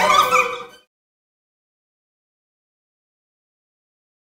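Audio read two samples at a time (double speed) runs from start to finish. The reader treated each pair of samples as a single frame, as if the stream had two channels or samples twice as wide, so everything plays back at 2x speed and rises 12 semitones, a full octave. The result sounds hurried and chipmunk-like.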